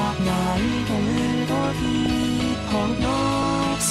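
Weak DAB reception let bit errors past error correction into the MP2 data, causing DAB burbling: short blips of noise in single sub-bands at 1.78–2.23 s and 3.42–3.72 s.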